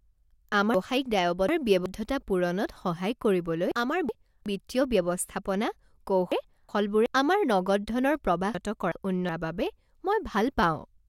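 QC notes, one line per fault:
0.74–1.86 s, 3.72–4.46 s, 6.32–7.06 s, 8.55–9.29 s: chunks out of order. The speech jumps around in blocks of about 0.37 s. In each spot one block turns up late and plays after material that should have followed it: two blocks late in the first spot, one late in the other three. Nothing goes missing, but the order is scrambled and you get hard joins at the block edges.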